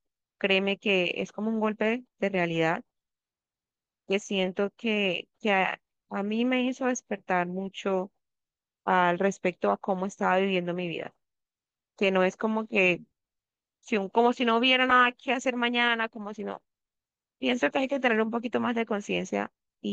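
No technical faults can be heard anywhere in this speech recording. The sound runs continuously, with no point at which anything goes wrong.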